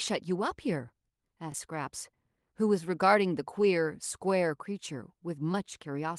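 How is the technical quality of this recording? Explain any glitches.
Two short glitches stand out in this speech recording. It came through a WebRTC call path, and the Opus coding tops out around 12 kHz.

At 1.52 to 1.54 s there's a repeated buffer. Fresh audio didn't arrive in time, so the device played its last chunk once more, which fits a 20 ms buffer. You hear a tiny stutter or click at the hard join, with roughly that much real audio lost.

From 5.52 to 5.55 s there's a short concealed packet loss. About 10 ms of audio never reached the decoder, so it extended the previous sound for about 12 ms and blended back in. It comes across as a quick smear or wobble.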